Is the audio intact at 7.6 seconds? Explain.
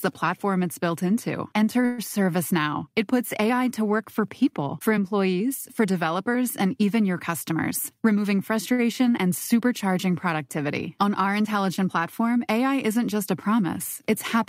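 No. A jitter buffer speed-up runs from 7.51 to 8.72 s, between "developers and even your" and "and supercharging productivity". Whole pitch periods are cut to shed a backlog of about a tenth of a second, so the speech plays at 108% of its normal rate at unchanged pitch and sounds hurried. On a spectrogram the harmonics keep their spacing while the syllables shrink in time.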